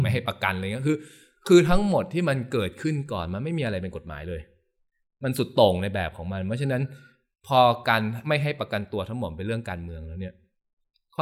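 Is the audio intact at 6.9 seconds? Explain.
Yes, the speech at 6.9 seconds is intact, with no audible dropout, click or distortion at that moment.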